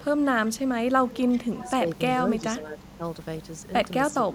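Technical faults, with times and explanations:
1.11–1.39 s and 1.57–1.71 s, echo leak: a faint copy of the speech returns about 355 ms late, likely from a far-end loudspeaker that the echo canceller failed to fully remove.
1.61–1.83 s, 2.40–3.01 s and 4.15–4.28 s, speech suppressed in double talk: the speech dips by up to about 10 dB, likely because the canceller confused it with echo while both sides talked.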